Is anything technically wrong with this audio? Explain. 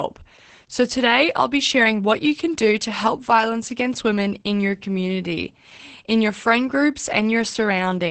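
Yes. Throughout the speech, the sound is muffled, hoarse and faintly robotic, with nothing above about 8.5 kHz. This is heavy Opus voice compression: Opus's SILK linear-prediction coder, limited to wideband, codes the excitation only coarsely at a rate that points to roughly 10 kbps.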